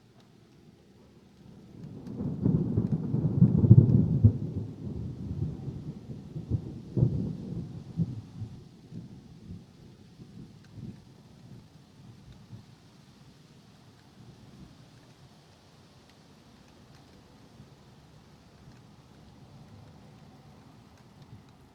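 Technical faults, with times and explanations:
9.34 to 13.13 s, jitter buffer speed-up: the receiver's buffer held too much audio and trimmed short pitch-period slices repeatedly, running the sound about 11% fast at unchanged pitch, roughly 0.4 s shed. On a waveform, events crowd closer; spectrogram harmonics keep their spacing while onsets compress.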